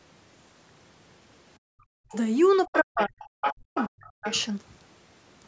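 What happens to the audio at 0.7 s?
At 0.7 s the speech comes through intact, with nothing interrupting or distorting it at that moment.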